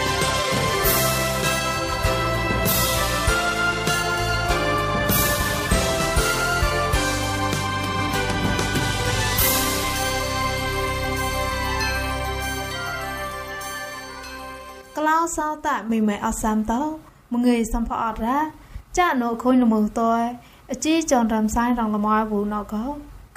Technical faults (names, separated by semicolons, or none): none